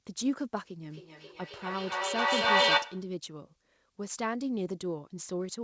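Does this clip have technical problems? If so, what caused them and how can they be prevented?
Yes. From 0.9 to 3.16 s there is feedback echo between two devices. One device replays what the other's microphone sent, that microphone picks it up again, and neither echo canceller removes the other's playback. The sound returns roughly every 300 ms, thinner and more ringing, and builds to about 9 dB above the speech instead of dying away. Having only one device in the room join the call, or muting the second device's speaker and microphone, prevents this.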